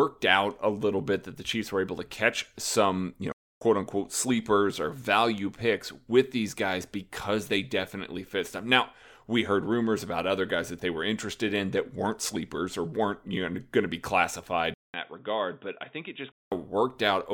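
At 3.32 s, just after "to catch some you", the speech cuts to silence for about 0.29 s and resumes at "unquote sleepers or value" at 3.61 s. This is a playback stall. The output simply stops mid-phrase and then picks up again. The likely cause is the player running short of data or its thread being held up, so nothing reached the output until it recovered.

At 14.74 s, after "going to be classified", there is a 200 ms gap. The speech then comes back dull and boxy, with a level drop of roughly 5 dB and a new faint noise floor well below the signal. This continues until 16.52 s, when the fuller sound returns. The pattern points to an input switched to a poorer device, likely a narrower-band microphone or headset call profile with its own tone and background noise.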